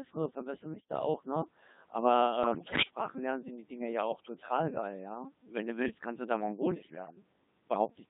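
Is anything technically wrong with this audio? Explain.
Yes. The whole clip sounds robotic and buzzy, with heavy damage, the mark of the Codec 2 vocoder at what sounds like about 2.4 kbit/s. The decoder rebuilds the speech from sine waves using only pitch, voicing, energy and a spectral envelope, so the original waveform is gone.

Bit errors on digital voice radio break in at 0.74–0.89 s, 2.44–2.82 s and 6.72–7.16 s. The speech lurches in pitch, loudness and tone colour, turning into bleeps, warbles and gibberish. At this low rate, corrupted bits, a few percent, each steer a whole frame's parameters.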